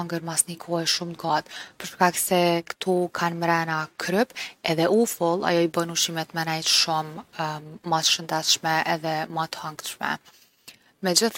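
Right near the end, from about 10.15 to 10.18 s, there's a case of compressed frames skipped. A chunk of the encoded stream never got played, either because it wasn't in the file or because the decoder rejected it as corrupt, so the speech jumps ahead by roughly 20 ms. You hear a sliver of the speech just go missing.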